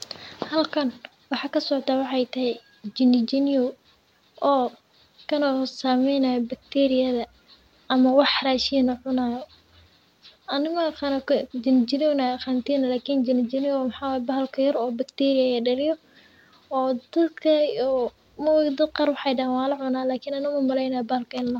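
No technical faults are audible.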